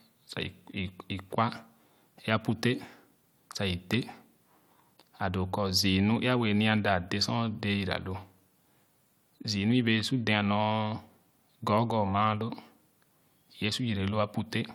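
No technical faults occur at any point, so there is nothing to describe in time order.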